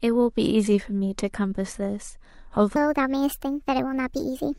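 From 2.76 s to the end, a section at the wrong speed plays 1.39 times fast, lifting pitch about five semitones. This is likely from a mismatched playback clock. On a spectrogram, harmonics jump upward and spread apart there.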